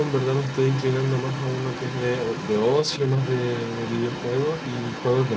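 From the start at 0 s to the end near 5.4 s, a second voice runs faintly underneath the speech. This is the other side's voice leaking through. It sits around 15 dB below the main talker. The likely cause is residual echo: the far end played on the device's loudspeaker and reached the microphone, and the echo canceller left part of it behind. The leak stays within the same band, which tops out at 8 kHz, as a 64 kbps G.722 call path would.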